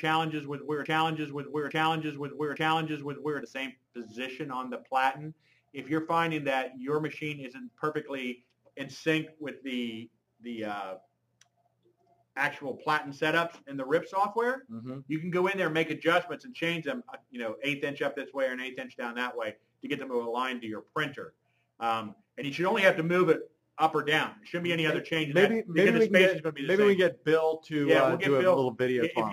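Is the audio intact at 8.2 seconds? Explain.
Yes, the audio is intact at 8.2 seconds, with no dropout, glitch or other fault to be heard at that moment.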